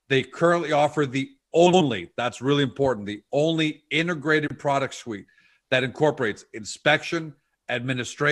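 Speech with two brief garbled flutters at 1.66–1.81 s and 4.47–4.60 s. This is frames out of order: two neighbouring blocks of about 70 ms and 93 ms, which fits runs of three and four frames, swapped places, so each stretch plays its halves reversed without losing time.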